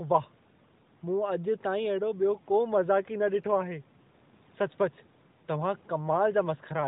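Speech clip with no technical faults to report.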